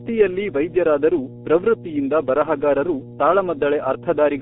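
From start to finish, mains hum sits under the speech as a steady 60 Hz tone with some low harmonics, roughly as loud as the talker. Power-line pickup through a ground loop or transformer causes it. Its fixed pitch and unchanging level set it apart from wind rumble or handling noise.

Also throughout, the speech carries heavy G.723.1 codec damage. The band is squeezed to roughly 200 Hz–3.5 kHz, with nothing above 3.7 kHz, and the slow-updating voice model leaves the speech muffled, hoarse and smeared at consonants, which fits a rate near 6 kbit/s. A plain low-pass filter would dull the sound without this rasp.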